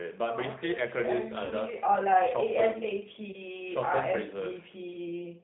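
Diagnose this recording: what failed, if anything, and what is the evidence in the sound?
The codec stage is at fault throughout: the speech carries the G.729 codec's rough, slightly synthetic texture and stops at 4 kHz. At 8 kbit/s it rebuilds each frame from a filter, a pitch predictor and a few pulses. That grainy buzz is what separates it from a plain narrowband telephone line, which is dull but smooth.

The network caused VoIP packet loss concealed by the speech codec, at 1.45 to 1.54 s and again at 3.32 to 3.39 s. The decoder stretched its last frame into a fading sound and recovered weakly afterwards. Simple dropouts would be silent gaps or clicks instead. The gaps match about 60 ms and 20 ms lost, which fits three packets and then one packet of 20 ms each.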